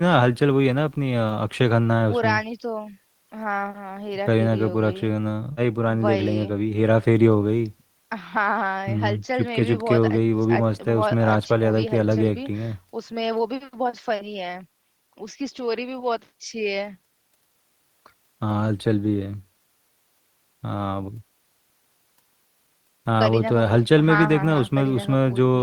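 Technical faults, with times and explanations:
No technical faults detected.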